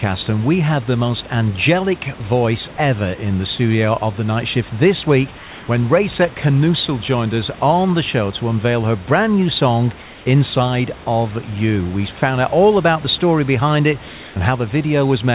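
At 2.18 s, a 20 ms slice of speech vanishes into flat hiss, likely sound dropped by the voice detector after it mistook that moment for background. From 5.38 to 5.68 s, 10.02 to 10.26 s and 14.08 to 14.36 s, the real room background, sitting about 20 dB below the loudest speech, turns into smooth, detail-free noise about 1 to 2 dB quieter. This is likely comfort noise in place of the background, synthesized while the sender paused transmission. At 12.2 s, another 20 ms stretch is replaced by the same hiss, with about 10 ms of actual sound lost, again likely sound dropped by the voice detector.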